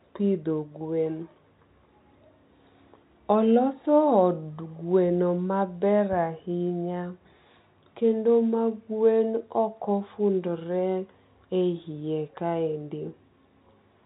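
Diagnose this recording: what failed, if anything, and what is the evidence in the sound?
Nothing failed: the speech is carried intact through the telephone-band path, with no dropouts, clicks, level jumps or timing breaks anywhere in the recording.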